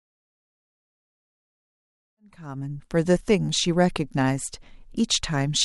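No faults heard; the speech fades in smoothly from around 2 s to full level at 3.25 s, with no click or hard edge.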